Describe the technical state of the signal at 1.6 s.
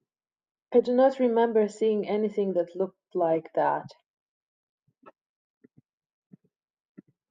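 At 1.6 s the speech is intact, with no dropout, distortion or other fault at that moment.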